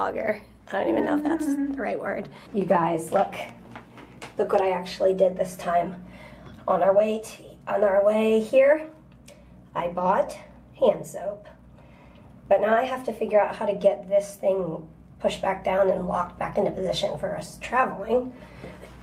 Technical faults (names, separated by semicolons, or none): none